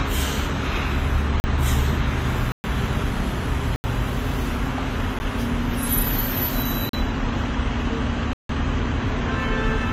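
Throughout, the audio has likely been through transcoding between lossy codecs, with each encoder spending bits on the previous one's artefacts and adding its own. The result is different codec artefacts heard together on the everyday sounds, with nothing above 15.9 kHz.

Blocks of digital silence replace stretches of samples with zeros at 1.40–1.44 s, 2.52–2.64 s, 3.76–3.84 s, 5.19 s, 6.89–6.93 s and 8.33–8.49 s. Each one cuts out and back with no fade. The 12.5 ms gap is a tick, and the 160 ms gap is a short hole.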